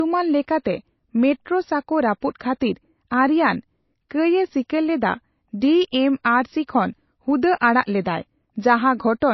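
Speech, with nothing above 5.8 kHz throughout: likely low-bitrate audio saved at a high bitrate, which fits a 24 kbit/s MP3 re-encoded at 320 kbit/s.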